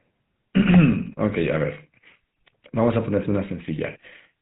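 Throughout, the GSM full-rate codec rebuilds speech from coarse pulse excitation and passes nothing above 4 kHz, leaving a plainly buzzy, gravelly, muffled voice. From 1.39 to 1.48 s, GSM bit errors corrupt the decoder's filter, pitch and gain values, so the voice briefly squawks and gargles across what fits about five frames.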